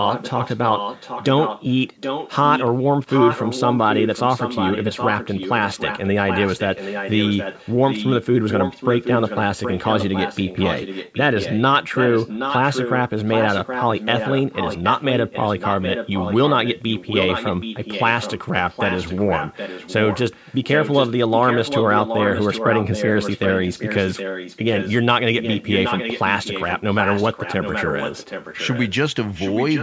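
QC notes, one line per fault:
0.02–2.71 s, 3.06–11.6 s, 11.92–24.96 s, 25.4–29.02 s, 29.34–29.83 s, echo leak: a copy of the speech trails it by 773 ms, about 5 dB below the direct sound and about 10 dB below from 25.4 s. Likely a loudspeaker on the other end whose echo canceller passed its microphone pickup back.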